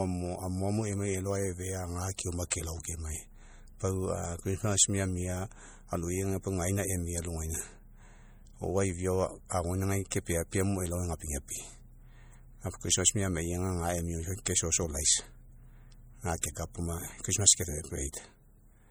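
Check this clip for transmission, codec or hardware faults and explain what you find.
Two faults are audible: codec damage across the whole speech clip and brief pre-echoes before five attacks.

MP3 compression, throughout: the speech sounds watery and swirly, with smeared onsets and plainly audible damage. The likely cause is an MP3 encoder starved of bits, consistent with roughly 48 kbps. It zeroes weak frequency lines that flicker between frames and leaves nothing above 21 kHz.

Pre-echo, at 2.18, 10.11, 14.45, 16.41 to 16.43 and 18.12 s: a short hiss runs 11 to 20 ms ahead of each sharp onset. The transform block spreads noise sized for the loud attack back into the quiet gap before it, so the attack sounds softened.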